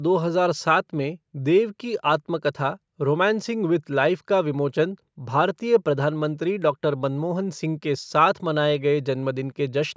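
Nothing stood out on listening to this speech, which carries the usual signature of call microphone processing, with the lowest bass trimmed and no content above 8 kHz.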